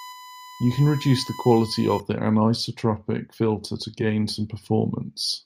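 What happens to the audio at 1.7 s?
A steady, fixed-pitch whine at 1 kHz sits under the speech at 1.7 s, roughly 20 dB below it. It runs from the start of the clip to 2.0 s and stops just before "the anisotropic filter to". This is USB whine: the USB bus draws current in 1 ms frames, and that 1 kHz pulsing leaks into the audio through the power or ground path, producing a constant tone at the frame rate.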